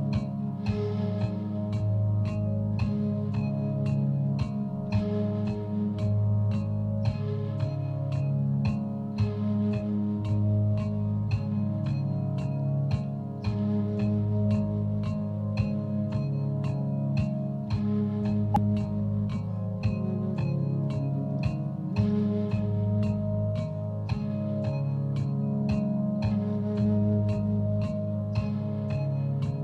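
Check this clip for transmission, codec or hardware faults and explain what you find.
One fault is present, a short burst of damaged data in the compressed stream from 18.54 to 18.58 s. Corrupted bytes there cause the decoder to misread or reject frames and lose sync while it searches for the next frame header, leaving a brief disturbance of about 40 ms in the audio.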